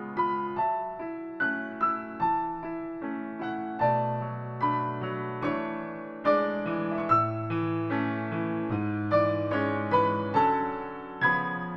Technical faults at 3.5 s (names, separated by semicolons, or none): none